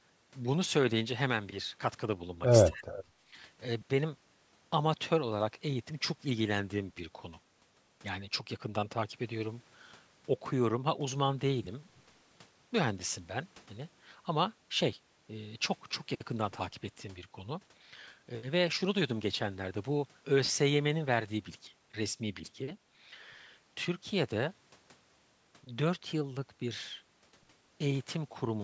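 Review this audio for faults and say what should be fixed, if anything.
From 2.68 to 2.99 s the speech dips sharply, by roughly 30 dB, for about a third of a second. This is speech suppressed in double talk: the echo canceller likely could not separate the talker from loudspeaker echo while both sides spoke, so it turned everything down. Better double-talk detection in the canceller would keep the near talker at full level.

From 2.73 to 2.8 s a faint copy of the speech returns 203 ms late, about 25 dB below the speech. This is an echo leak, where the loudspeaker side's echo canceller likely failed to remove all of its microphone's pickup and sent the remainder back. A headset, or a better-converged echo canceller on that side, would prevent it.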